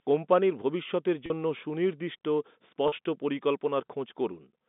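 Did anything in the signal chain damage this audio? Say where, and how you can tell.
Yes, at the network: packet loss with pitch repetition at 1.26 s, just after "কোম্পানির ভবিষ্যতের", and at 2.88 s. Each 40 ms gap, consistent with two 20 ms packets, is filled with a briefly held, buzzy repeated pitch period rather than the silence of a plain dropout. The narrow telephone band from the G.711 line stays steady across both.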